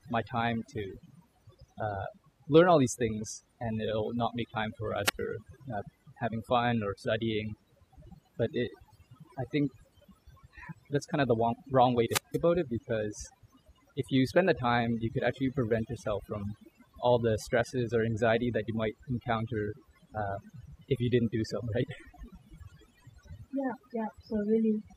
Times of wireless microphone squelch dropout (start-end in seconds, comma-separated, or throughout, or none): 5.04-5.20, 12.06-12.41